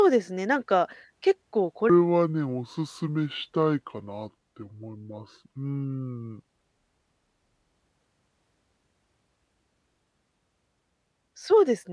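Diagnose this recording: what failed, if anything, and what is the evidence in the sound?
A wrong sample rate fault at the playback stage: from 1.90 to 7.74 s the speech drops about 6.5 semitones and slows to 0.69 times speed, pitch and tempo shifting together. That points to 32 kHz audio being played at 22 kHz with no conversion.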